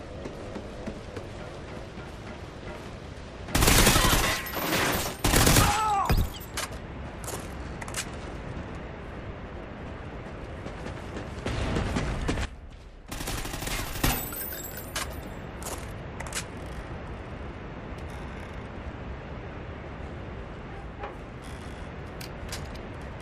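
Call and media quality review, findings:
Sudden gain jump, 12.45 s to 14.04 s. Level drops by about 12 dB in a single step, with the background noise falling right along with the sound, then snaps back up at 14.04 s. Likely a digital gain stage or volume setting applied with no ramp, so the change lands between two adjacent samples. Worth checking whatever touches gain in that window.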